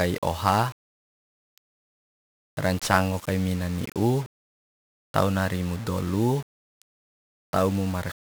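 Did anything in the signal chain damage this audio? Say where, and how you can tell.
Yes, at the codec stage: 1-bit DFPWM compression damages the speech from start to finish. Each sample is a single bit nudging an adaptive level, so heavy broadband quantisation noise makes it fuzzy and crackly, consistent with a 48 kbps stream. A spectrogram shows a dense noise floor burying the treble; the waveform looks grainy and stepped.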